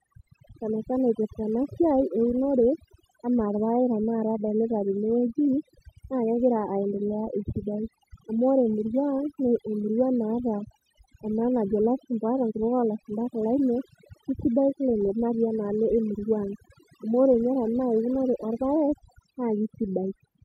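Overdone noise removal runs through the whole speech recording: bands near the estimated noise floor are pulled down or switched off, so pauses fall to near silence with twinkling specks, unlike a gate, which mutes everything at once.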